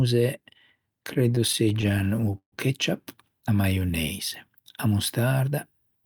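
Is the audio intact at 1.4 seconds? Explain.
No, repeated stalls (stutter) from 1.13 to 2.54 s: the jitter buffer kept running dry, so the receiver stretched the last sound through 21 gaps of up to 145 ms, dragging the speech.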